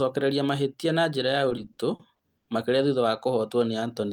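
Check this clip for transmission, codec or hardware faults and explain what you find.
Two transmission faults are audible in this speech clip, both from a receiver's jitter buffer.

Repeated stalls (stutter) run from 1.49 to 2.49 s. Packets arrived late, so the buffer ran empty eight times, the longest wait 100 ms, and the receiver held the last sound for 260 ms in total, about a quarter of that second. Nothing is dropped, so the speech drags and catches rather than skipping forward as with packet loss.

A jitter buffer slow-down follows from 3.80 to 4.12 s. To rebuild its reserve, the receiver repeated single pitch periods, adding 45 ms and playing at 89% speed. Pitch stays the same, which separates it from a tape-style slowdown. It is a smooth stretch without the breaks of the stutter.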